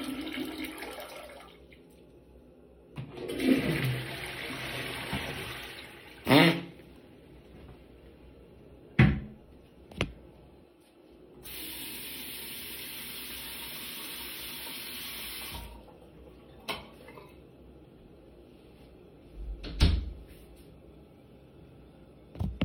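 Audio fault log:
No faults heard anywhere in this recording.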